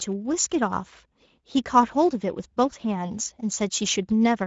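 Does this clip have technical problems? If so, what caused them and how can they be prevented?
Yes. Throughout this speech, Speex codec damage is plainly audible: a hoarse, noisy texture from the CELP coder's scarce excitation bits, which fits a mid-range setting near 16.8 kbps, with nothing above 7.6 kHz. Unlike the swirly warble of transform codecs, this roughness is noisy. Prevent it by using a higher Speex quality setting or a modern codec such as Opus.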